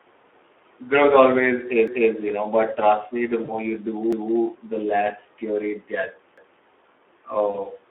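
The whole clip carries Speex codec damage, and it's plainly audible: the speech sounds hoarse and grainy, squeezed into a phone-style band of roughly 300 Hz to 3.5 kHz. That level of roughness fits Speex running at around 11 kbps, with too few bits to model the excitation cleanly.

At 1.88 to 2.13 s you get the first overlapping-chunks stutter. The audio was handled in 2-second chunks that start before the previous one finishes, so a 250 ms slice plays twice at the join.

From 3.44 to 3.58 s there's VoIP packet loss concealed by the speech codec. About 40 ms of audio went missing, and the decoder filled the gap by stretching its last pitch and filter into a fading smear. The sound stays weak or distorted for a moment after the data comes back.

The overlapping chunks come round again on a regular 2.25-second beat, at 4.13 to 4.38 s and 6.38 to 6.63 s. Each is another 250 ms repeat, heard as a stutter at the seam.

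The concealment shows up once more at 7.50 to 7.56 s, where another 40 ms dropout turns into that brief, decaying patch.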